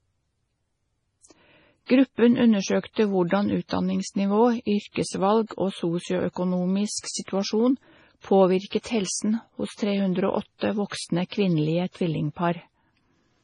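Throughout the speech, nothing sounds above 10.5 kHz, and heavy damage makes it watery and swirly, with metallic chirps on s sounds and smeared onsets. This is likely MP3 compression starved of bits, fitting about 24 kbps. A spectrogram shows a flat ceiling and blinking high-frequency specks.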